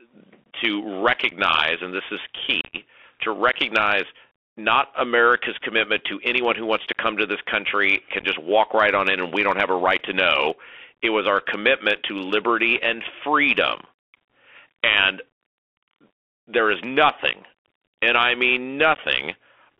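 Throughout, the speech passes through the Bluetooth CVSD headset codec: 64 kHz one-bit delta coding confines it to a 300 Hz to 3.4 kHz band, with granular hiss and scratchy sibilants. Unconcealed Bluetooth headset packet loss punches abrupt holes at 1.30–1.33 s, 2.62–2.76 s between "and this is" and "to recognize not" (the worst, about twenty packets), 8.20–8.26 s, and 18.95–18.99 s after "nothing and I mean".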